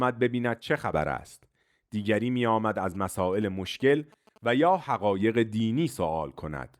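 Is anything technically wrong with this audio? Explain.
Yes. From 2.95 to 4.76 s there are GSM signalling bursts. A nearby 2G phone transmits brief radio bursts, and the audio circuit rectifies them. They come through as a galloping ticking with short 217 Hz buzzes, roughly 25 dB below the speech.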